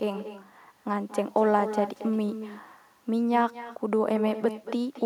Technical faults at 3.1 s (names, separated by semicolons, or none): echo with no canceller